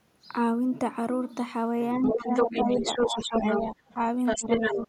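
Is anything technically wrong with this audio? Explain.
Yes, there are two related problems, both showing up when the far end talks over the speaker.

Speech suppressed in double talk, from 1.98 to 3.75 s and again from 4.36 to 4.88 s: the talker dips by around 10 dB for roughly a second in the first stretch and a few hundred ms in the second. Likely the echo canceller couldn't tell the local talker from loudspeaker echo, so it ducked both.

The other side's voice leaking through, from 2.05 to 3.64 s and 4.25 to 4.87 s: a second voice comes through at roughly the same level as the talker. The far end is likely playing on a loudspeaker, and the echo canceller isn't removing all of it from the mic.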